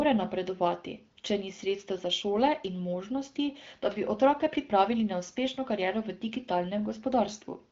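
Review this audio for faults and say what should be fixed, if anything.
Nothing here needs fixing: the speech carries the light coding texture and the top-end limit near 7.5 kHz expected of an AMR wideband (HD Voice) link, consistent with a rate around 15.85 kbit/s.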